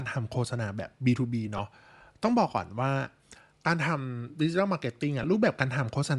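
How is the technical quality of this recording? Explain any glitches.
The quality is compromised by coding damage throughout, plus three brief dropouts.

The speech has a plainly audible breathy, grainy edge from start to finish, with the top end sounding thin and noise-filled. That's likely Bluetooth LC3 compression squeezing the spectrum. The 7.5 ms framing and the level of damage fit something around 48 kbps.

Then there are lost LE Audio frames at 1.57–1.59 s, 3.65 s and 5.22–5.24 s. The decoder covers each gap by repeating the last spectrum with scrambled phase, so you hear a short noisy smear. The first and third gaps are about 15 ms each and the middle one about 7.5 ms, which fits losing a frame or two at a time.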